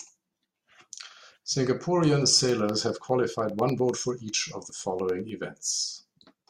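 From 2.39 s to 5.29 s the speech carries periodic USB or driver dropouts: a tick every 0.1 s, about thirty in all, where something stalls the bus or driver and a fraction of a millisecond of audio is replaced by silence.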